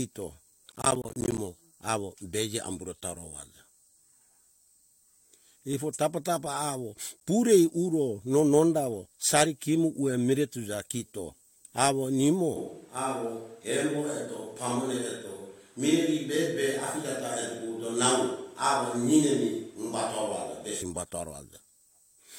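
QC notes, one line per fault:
0.72–1.38 s, processor overload crackle. A burst of gritty crackle rides on the speech for about two thirds of a second, then stops. The processor was falling behind and missing buffer deadlines one after another. Each missed buffer left a short hole of silence with hard edges. Around thirty such holes, at a spacing that fits buffers of roughly 10 ms, run together into tearing grit. Once the load eased, the crackle stopped.
7.2 s, gap between stream segments. A single hole of about 12 ms of silence cuts into the speech, with abrupt edges on both sides. The time stamps of two adjoining segments did not meet, so the player filled the space between them with silence. The timing fits segments 6 s long. Nothing was lost, because the gap added time rather than removing audio. It is heard as a brief, sharp dropout.
12.56–20.82 s, switch to a distant microphone. The sound turns suddenly roomy and hollow, with thinner bass. 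The level drops by about 5 dB. Room noise becomes audible at about 35 dB below the speech. The change back at 20.82 s is just as abrupt. The likely cause is that the close microphone's signal dropped out and a microphone further away took over. That more distant pickup carries more of the room and less of the direct sound.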